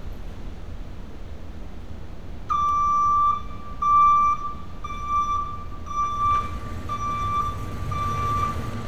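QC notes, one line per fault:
2.69 s electrical switching spike. One sharp snap sits over the sound, quiet at about -30 dBFS. Likely a nearby switch arcing into the line.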